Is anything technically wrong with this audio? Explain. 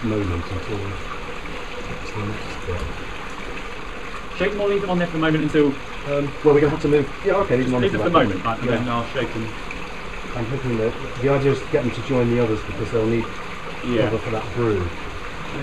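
Yes. There is a time-stretched section from 3.67 to 8.73 s. In that stretch the sound runs about 1.54 times faster, yet the pitch does not rise. The pace jumps abruptly at the start and drops back at the end. This is likely software squeezing that part to fit a shorter length, keeping pitch by dropping short slices of audio. Those dropped slices make the section sound rushed.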